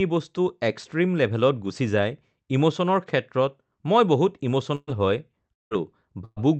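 At 4.75 to 4.90 s and again at 6.25 to 6.39 s, a burst of packet loss removes about 120 ms each time. The receiver stretches the last sound into a brief fading buzz or hiss before the audio resumes further on, with only a few milliseconds of true silence.

Between 5.53 and 5.74 s the sound is held and fades as before, but the fill gives way to a stretch of near-silence before audio returns, with about 0.18 s missing. That lapse into silence, rather than jumping straight back, sets it apart from the shorter bursts and points to a likely long network dropout.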